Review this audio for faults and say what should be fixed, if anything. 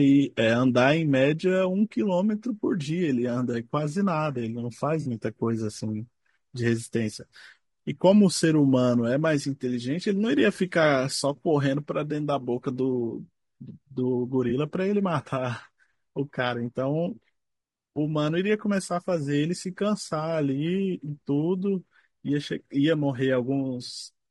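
The speech sounds rough and grainy throughout, with noise between harmonics. This is likely low-delay AAC compression, and the damage fits about 32 kbps.

AAC frame loss with concealment occurs at 5.01 to 5.07 s and 14.49 to 14.52 s. The decoder patches the missing audio from earlier spectrum, leaving short smeared, noisy patches.

To prevent these faults, raise the codec bitrate and add packet redundancy or forward error correction on the transmission link.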